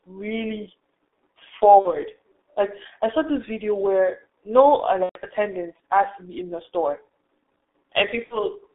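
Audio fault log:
throughout G.723.1 codec: The speech is held to a narrow line band of roughly 300 Hz to 3.6 kHz, so it sounds thin and muffled. Heavy coding damage makes it hoarse and smears consonants, which fits a low-rate G.723.1 stream near 6.3 kbit/s. The codec works in 30 ms frames and rebuilds the voice from a slowly updated model, so quick changes in the sound are blurred.
1.79–1.94 s, 5.03–5.19 s, 8.24–8.40 s VoIP packet loss concealed by the speech codec: About 60 ms of audio is missing at 1.79 s and at 8.24 s, and about 120 ms at 5.03 s. In each gap the decoder keeps repeating its last pitch and filter at falling gain, so the speech stretches into a fading buzzy, coloured tone. The longest gap, at 5.03 s, goes silent after its first two lost frames.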